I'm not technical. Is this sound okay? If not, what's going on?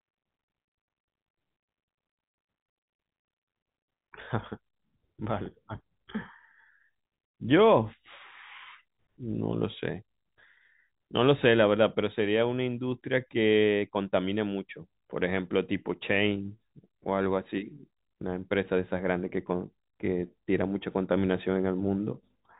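Yes, this telephone-quality speech has no faults.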